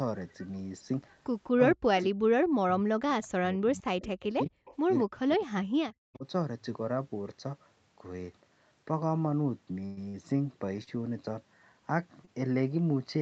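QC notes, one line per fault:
1.5 to 6.25 s, speech suppressed in double talk: the talker's speech drops out in pieces at 1.5–1.9, 2.07–2.2, 2.61–3.02, 3.23–4.51 and 5.03–6.25 s, sinking by about 40 dB at its deepest. This is likely an echo canceller muting near-end speech while the far end talks over it.
4.65 to 4.77 s, echo leak: a faint delayed copy of the speech, about 227 ms late and about 25 dB below the direct sound, slips through briefly. This is likely residual loudspeaker echo the far side's canceller failed to remove and returned.
9.85 to 10.17 s, burst of packet loss: two gaps, at 9.85–10.0 s and 10.09–10.17 s, are concealed by stretching the preceding sound into a fading buzz or hiss for about 110 ms and 50 ms, after which the speech picks up again with roughly 60 ms missing each time.
10.84 and 12.25 s, short stall from a late packet: the sound is held unnaturally long, about 30 ms and 20 ms, with a slight buzz, while the jitter buffer waits for a delayed packet, then continues from the same point with nothing lost.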